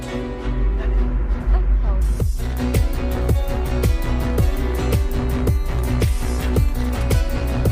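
No technical faults can be heard anywhere in the recording, and the signal holds steady throughout.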